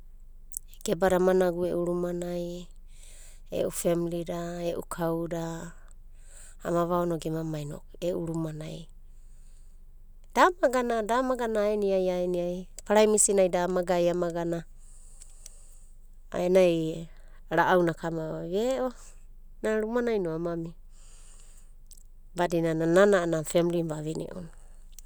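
Listening to the speech from beginning to end, nothing stood out as a technical problem.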